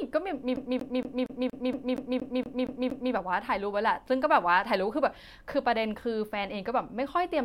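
A speech recording with a CD stuck on one turn from 0.56 s to 3.14 s. The same 0.23 s fragment plays eleven times, with a brief mute at each jump, as a scratch throws the laser back one track on every rotation. Unlike a network or buffer dropout, which repeats or freezes audio at irregular intervals, this stutter keeps a fixed, even rhythm set by the disc's spin.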